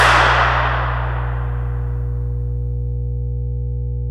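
Mains hum runs through the whole clip: a steady 60 Hz tone with some low harmonics, sitting only a few decibels below the sound itself. Power-line voltage has leaked into the signal path, most plausibly through a ground loop or a nearby transformer.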